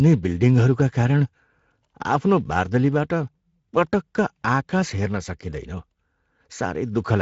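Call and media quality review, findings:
Speex codec, whole clip: steady hoarse, noisy roughness on speech, nothing above 7.7 kHz, consistent with a mid-rate wideband setting. Constant, without dropouts or warbling, unlike packet loss or transform-codec artefacts.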